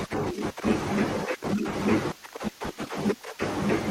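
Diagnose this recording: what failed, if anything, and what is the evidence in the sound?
The failure is frames out of order, in the network stage, where packets reached the decoder in the wrong sequence. At 0.82 to 0.92 s the speech briefly garbles into a flutter. At 2.78 to 2.97 s a longer stretch does the same. The first swap exchanges two blocks of about 43 ms. The second exchanges blocks of about 85 ms. These sizes fit one and two codec frames per run. Nothing is dropped, so no time is lost.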